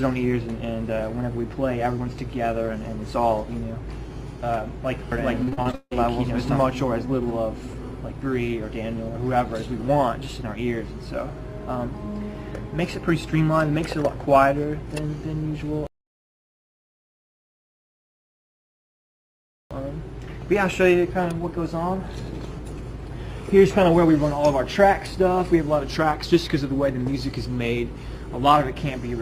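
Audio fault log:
5.43–5.93 s, repeated packet loss (robotic sound): about six short holes follow one another, each patched by extending the last sound, so roughly 60% of this half-second is filler and the longest gap is about 159 ms. The quick, repeated patches give a choppy stutter rather than one clean dropout.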